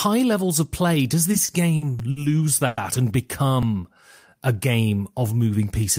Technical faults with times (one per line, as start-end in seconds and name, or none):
1.31-2.18 repeated stalls (stutter)
1.99 repeated buffer
2.66-2.79 call audio freeze
3.63 repeated buffer
3.80-4.31 jitter buffer slow-down